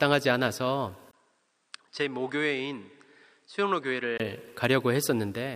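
At 1.11 s a 20 ms gap opens, then the sound turns duller, about 10 dB quieter and carries a faint new background noise until 4.20 s, likely an input switched to a poorer device. A spectrogram shows everything above 9.2 kHz cut flat, and the waveform visibly shrinks.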